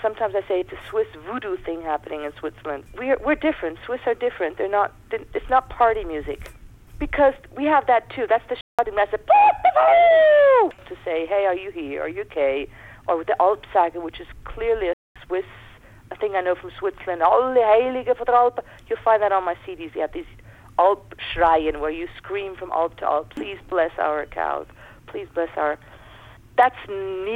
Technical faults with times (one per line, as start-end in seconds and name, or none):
8.61-8.79 playback stall
14.93-15.16 playback stall